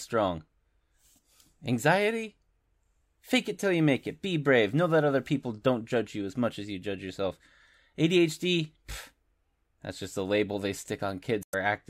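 A speech recording with one fault near its end. From 11.41 to 11.54 s there is damaged data in the compressed stream. Corrupted bytes make the decoder misread those frames and lose sync, so about 0.14 s comes out damaged.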